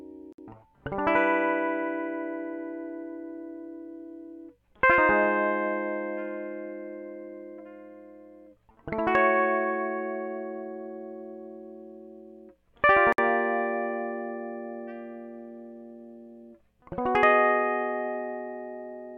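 At 0.33 s and again at 13.13 s the music drops out for about 58 ms, a gap at a join of encoded pieces where separately encoded chunks were spliced untrimmed, then picks up where it stopped.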